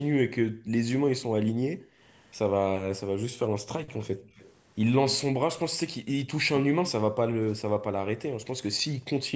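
From 0.5 to 0.7 s, 1.22 to 1.33 s and 1.75 to 2.0 s, the room background is gated by the echo canceller. It clamps the microphone down by about 40 dB while far-end audio plays, so the ambience vanishes briefly and snaps back. The talker's speech is not what drops, which separates this from double-talk suppression.

From 4.04 to 4.52 s a faint delayed copy trails the speech by 270 ms, roughly 30 dB down. This is most likely an echo leak, where the far end's canceller let loudspeaker pickup through. Its fixed lag distinguishes it from room reverberation.

At 6.52 to 6.63 s the talker's own speech sags by around 20 dB for about a tenth of a second, likely speech suppressed in double talk, with both sides speaking at once. Here the voice itself dips, not just the background.

At 7.32 to 7.46 s the background is gated once more, dropping about 40 dB for roughly 150 ms.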